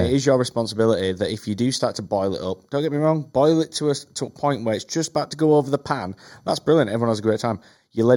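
Channel delay (comb filtering) runs throughout the speech. One channel arrives about 0.2 ms after the other, and summing them to mono cancels shared content at evenly spaced frequencies, starting around 3 kHz. The result is a hollow, phasey colour with fixed notches.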